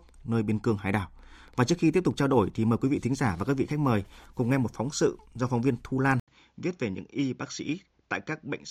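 At 6.2 s the speech cuts out for about 80 ms, then returns duller and boxier through to the end. Nothing is left above 7.3 kHz, the level sits roughly 5 dB lower, and a new faint noise floor appears well beneath the speech. This is an input switched to a poorer device, likely a change to another microphone mid-recording. A plain filter or codec bandwidth drop would not bring the brief gap, level step and fresh background noise together.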